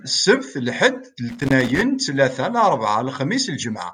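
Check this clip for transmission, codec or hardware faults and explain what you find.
A single hardware fault turns up in the speech. From 1.29 to 1.81 s, just before "ttlata larbɛa", there is loose connector crackle: a worn contact making and breaking chops the signal, and any DC on the line adds pops; it is heard as irregular scratching. A waveform shows ragged dropouts and spikes; a spectrogram shows scattered broadband vertical streaks.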